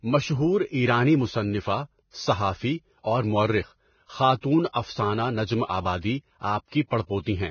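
Heavy Vorbis compression runs through the speech. Nothing survives above 6.6 kHz, and the coarse treble turns hissy and grainy, likely from a bitrate near 18 kbps.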